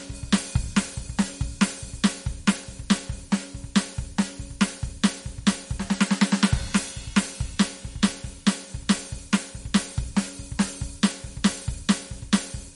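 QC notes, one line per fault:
Throughout: MP3 compression, plainly audible on this music. The treble is gone above about 11.2 kHz, and the top end swirls and goes watery as weak frequency lines drop in and out between frames. Attacks smear too, and the damage points to a low bitrate, likely somewhere around 48 kbps.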